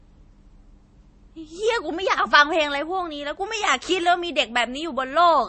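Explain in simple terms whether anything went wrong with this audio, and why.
MP3 compression, from start to finish of this speech clip, most likely explains what you hear. The damage is plainly audible throughout, and nothing above about 8.3 kHz survives, so the speech sounds dull and lacks crispness. To save space, the format discards treble above a fixed point and drops quieter details it judges unimportant. When squeezed this hard, those gaps flicker on and off, giving the speech a watery, swirly edge.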